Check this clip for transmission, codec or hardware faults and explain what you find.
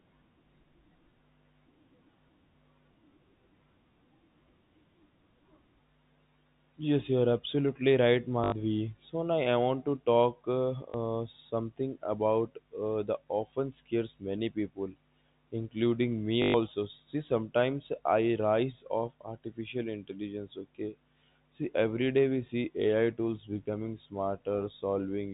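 Three short robotic stutters break up the speech, each a buzzing repeat: at 8.44 to 8.52 s (80 ms), at 10.90 to 10.94 s (40 ms), and at 16.42 to 16.54 s (120 ms). This is packet loss with the last packet repeated. When packets failed to arrive, the receiver kept replaying the last good one. The lengths fit 20 ms packets, so the longer runs buzz at about 50 Hz. The repeats seldom line up with the pitch. The audio is band-limited to 4 kHz by the G.711 telephone coding.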